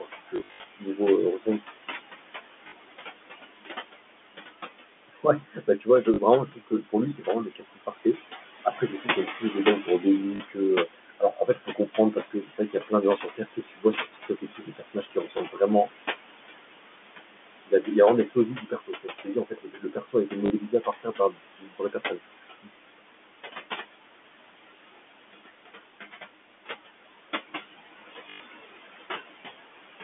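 Noise suppressor artifacts run through the whole recording. The suppressor pulls whatever it judges to be steady noise down by about 20 dB, frame by frame, so the room noise (about 10 dB under the speech) sinks in the pauses and comes back up under the talking.

From 0.00 to 1.64 s, the noise suppressor cuts into the speech itself, dropping parts of it by up to about 21 dB. Roughly half a second of material is affected, with soft consonants and word endings swallowed. Inside this stretch, from 0.36 to 0.64 s, packet loss with the last packet repeated removes 200 ms of audio, scattered across 280 ms, with the longest gap 80 ms. The receiver fills each gap by replaying the previous packet, and the longer runs buzz like a short robotic stutter.

Further packet loss concealment of the same kind occurs at:
2.68 to 2.72 s
6.14 to 6.18 s
10.36 to 10.40 s
15.38 to 15.40 s
20.46 to 20.50 s
28.3 to 28.4 s
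Most of these are 40 ms repeats, consistent with 20 ms packets. The one at 15.38 s is a single 20 ms blip, and the one at 28.3 s is a 100 ms run.

The suppressor again eats into the speech from 5.08 to 15.90 s, about five seconds in total, at up to about 21 dB. It does so once more from 17.67 to 22.69 s, around three seconds, at up to about 22 dB. In both stretches, quiet syllables and phrase ends fade out with the background.

Throughout, the G.711 telephone coding confines the sound to roughly 200 Hz to 3.5 kHz.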